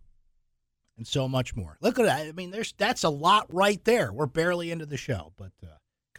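At 3.51 s, a block of digital silence appears in the speech: about 10 ms of samples were replaced with zeros. The signal drops to nothing and returns with no fade, so the abrupt edges produce a brief tick rather than an audible gap.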